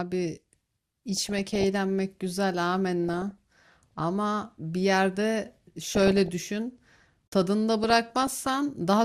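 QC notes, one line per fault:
1.14–1.64 s, 3.09–4.04 s, 5.82–6.28 s and 7.84–8.52 s, DAB burbling: weak reception lets a fraction of a percent of bit errors slip past error correction into the MP2 data. Corrupted samples put short noise blips in single sub-bands and corrupted scale factors make sub-bands jump in level for up to a frame, hence the burbling blips over the speech.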